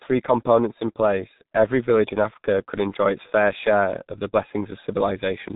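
Speech runs through a G.723.1 codec for its whole length, heavily damaged: muffled, hoarse, consonants smeared as the coarse 30 ms frames and sluggish voice model lag behind, fitting roughly 6 kbit/s. A spectrogram shows energy stopping flat at 3.8 kHz, with blurry, blocky harmonics.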